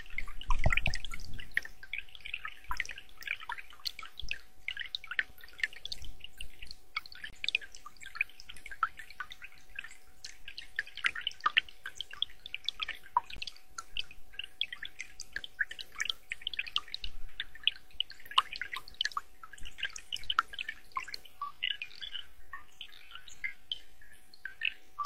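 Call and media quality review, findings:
Gap between stream segments, 5.30 s, 7.30–7.33 s, 13.37 s, 15.38 s. Hard-edged silent holes of 6, 27, 17 and 9 ms. Packager/player timestamps leave small gaps at segment joins, filled with silence. Spacing (5.3 to 7.3, 13.4 to 15.4) fits 2-second segments. Nothing dropped, only silence inserted.

Time-stretched section, 21.26 s to end. Pace drops abruptly to roughly half speed, pitch unchanged. Likely a length-fitting stretch repeating short pieces to preserve pitch, at 0.51× from this point.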